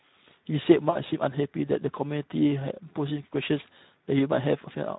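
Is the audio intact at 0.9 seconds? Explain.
No. From 0.89 to 1.00 s there is VoIP packet loss concealed by the speech codec. About 60 ms of data, consistent with three 20 ms frames, went missing. The decoder extrapolated from its last pitch and filter while lowering the gain, so the speech smears into a buzzy tone or a coloured noise that fades, and stays weak just after.

That gap sits within Speex codec damage that runs through the whole clip and is plainly audible at 0.9 s. The low bit budget, which fits roughly an 11 kbps setting, leaves the excitation coarse. The speech sounds noisy and hoarse, and any content above 4 kHz is only a shaped noise fill.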